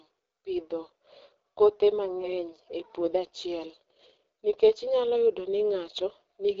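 Across the whole speech clip, the AMR wideband (HD Voice) codec leaves plainly audible damage. The codec rebuilds the voice from a pulse-excited model of the vocal tract. At this setting the model has too few bits to work with. The result sounds rough and raspy. The texture fits one of the lowest AMR-WB rates, around 8.85 kbit/s. The top band is filled with shaped noise rather than real detail. Nothing reaches above about 7.6 kHz.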